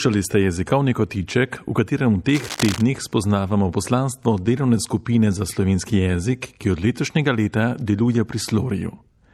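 From 2.29 to 2.83 s, just after "kotiček v katerem v" and before "spoznavamo poslanstvo delovne skupine", a burst of cable scratch noise sits over the speech for about half a second. It is dense, irregular crackling and rustling, roughly 10 dB below the speech level. The likely cause is a worn cable, connector or control being moved, so that its contact resistance fluctuates rapidly and injects uneven noise into the signal path.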